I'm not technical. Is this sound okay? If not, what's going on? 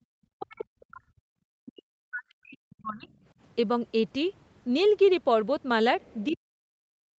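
No. The speech keeps getting pushed down. This is speech suppressed in double talk. From 0.19 to 1.39 s, 1.59 to 3.11 s, and 6.3 s to the end, the voice sinks almost to silence. The likely cause is both callers talking at once, so the echo canceller turned both down.

There is also the other side's voice leaking through. From 6.01 to 6.37 s a second, much quieter voice can be heard underneath. It was likely played on the talker's loudspeaker and picked up again by the microphone.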